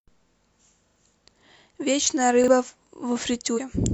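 At 0.88 to 0.96 s there is a repeated buffer. New audio failed to reach the device in time, so it played its last block again. The same piece of speech sounds three times in a row, with a hard join at each repeat. The result is a short stutter. Each repeat is 40 ms long, which fits a 40 ms playback buffer. Roughly 70 ms of the real speech never plays.

A second repeated buffer comes at 2.44 to 2.48 s. This time the 40 ms block plays once more after the original. It gives a single quick stutter, and about 40 ms of speech is lost.

At 3.53 to 3.60 s, compressed frames are skipped. The decoder did not play some whole frames, either because they were missing or because it rejected them as damaged. The speech jumps ahead by roughly a tenth of a second.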